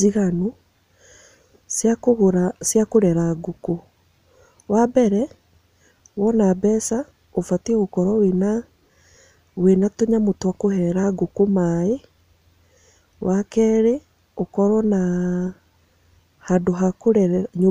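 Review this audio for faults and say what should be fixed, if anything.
Nothing in the signal needs fixing; level, continuity and timing hold steady throughout, with no technical fault to correct.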